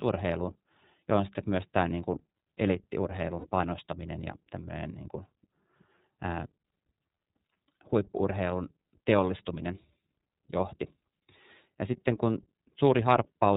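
Throughout the speech, the signal has passed through the iLBC codec, a narrowband coder that discards everything above 4 kHz and codes each frame independently. Its plainly audible damage leaves the voice muffled, slightly rough and synthetic, which fits the 13.33 kbps, 30 ms frame mode.

From 3.39 to 3.46 s, about 60 ms of lost iLBC frames, consistent with two dropped 30 ms packets, are concealed by the decoder repeating the last pitch cycle blended with noise. The gap sounds like a briefly held, buzzy vowel, and the voice returns cleanly straight afterwards.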